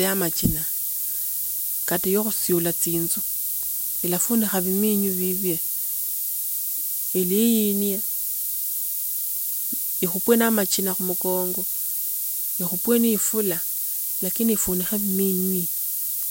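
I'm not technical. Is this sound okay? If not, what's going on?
No, not quite. All the way through the speech there's low bit depth with noise shaping: the audio is stored with only about 4 bits, so it's coarse, and that roughness gets pushed up into a thin, steady hiss, bright at the top, even louder than the voice itself.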